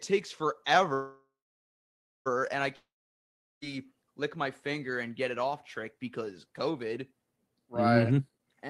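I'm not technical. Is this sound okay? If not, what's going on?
No, there are three problems. From 0.93 to 2.28 s there is a call audio freeze. The sound stalls with a brief fading buzz, then about a second of silence, likely from delayed packets. It resumes exactly where it stopped, so nothing is lost.

From 2.76 to 3.64 s a long network dropout leaves mostly silence. Unlike the freeze, the speech comes back further on, with about 0.86 s likely lost for good.

From 8.03 to 8.69 s a jitter buffer speed-up plays the speech at 150% speed, trimming roughly a third of a second. It sounds rushed but keeps the same pitch.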